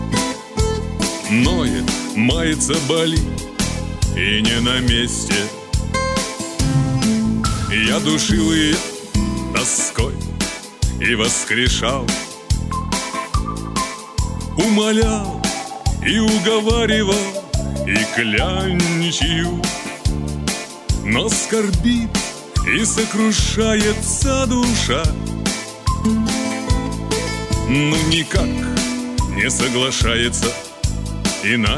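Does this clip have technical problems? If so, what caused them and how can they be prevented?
No, there are no technical problems to point to in this clip. Nothing in it calls for a fix or a preventive step.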